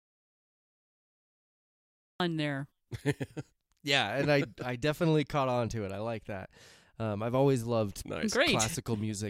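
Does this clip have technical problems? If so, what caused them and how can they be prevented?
Yes. Audio dropout to silence from 0.0 to 2.2 s: the clip opens in dead silence with no room tone, likely because the input was lost and silence was written until speech returned. Monitor input levels and secure connections before recording starts.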